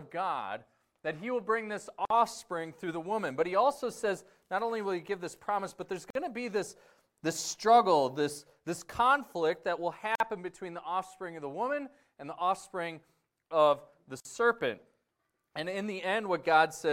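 At 2.05 s the sound drops out for about 52 ms, until 2.10 s. This is a gap at a join of encoded pieces. It recurs every 4 s: 6.10 to 6.15 s, 10.15 to 10.20 s, and 14.20 to 14.25 s, each about 49 ms. The pieces were encoded separately and joined untrimmed. Encoder start delay and last-frame padding stay in as silence. The codec smears the edges. The sound then resumes where it stopped.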